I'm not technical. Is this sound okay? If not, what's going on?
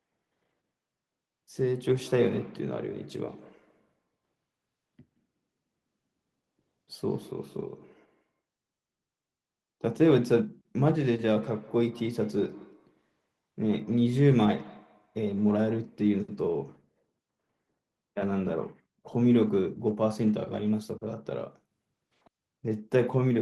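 No. From about 1.84 to 8.4 seconds, and again from 11.34 to 16.0 seconds, the speech has a faint echo trailing it, repeating roughly every 0.15 seconds. This is a feedback echo between two devices: two devices in the same room are on the call, one plays out what the other's microphone sent, and that microphone picks it up again. Each device's echo canceller only removes its own playback, so the repeat gets through. The second stretch is somewhat louder.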